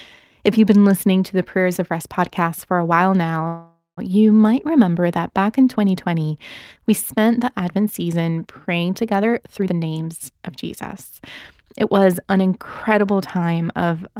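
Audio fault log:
3.47–3.99 s, call audio freeze: after "for a while now" the last sound buzzes, fades and goes silent briefly. Likely delayed packets; nothing is lost, just about 0.5 s added.
9.19–10.50 s, jitter buffer speed-up: after "season praying" speech runs about 135% fast at unchanged pitch. Roughly half a second of short pitch-period slices is cut to reduce delay.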